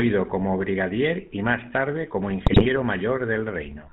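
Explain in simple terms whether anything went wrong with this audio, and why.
Two things went wrong here. The whole clip has been squeezed through the GSM full-rate codec, the original digital mobile phone codec. It rebuilds the voice from a rough model of the throat and mouth, driven by a simplified pulse signal. That gives the speech its gravelly, buzzy edge. It also cuts everything above 4 kHz, so the audio sounds dull and boxed-in from start to finish.

Then, from 2.46 to 2.67 s, right after "y más tarde como", you hear GSM bit errors. That's a burst of corrupted data, like on a weak phone signal. When the numbers describing the voice's tone, pitch and loudness get scrambled, the decoder rebuilds the wrong sound. For about a fifth of a second the speech turns into garbled squawks and gargling before it settles back down.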